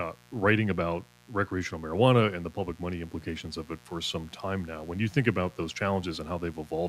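A mains buzz runs through the whole speech clip. Switching spikes from 60 Hz power leak in, adding a steady, raspy buzz about 30 dB below the voice.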